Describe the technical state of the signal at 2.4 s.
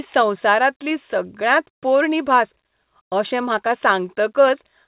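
At 2.4 s the speech is intact, with no dropout, glitch or other fault, only the narrowband sound of the call path, which carries nothing above 4 kHz.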